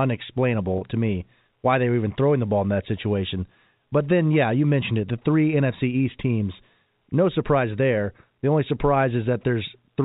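At 0.78 to 0.81 s, just before "to me why they", the speech holds briefly on a buzzy tone: packet loss with pitch repetition bridging a 30 ms gap.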